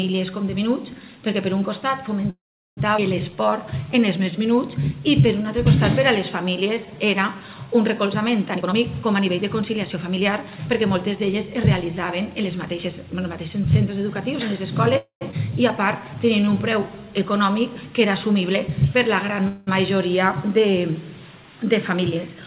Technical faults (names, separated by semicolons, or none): call audio freeze; skip ahead; jitter buffer slow-down; jitter buffer speed-up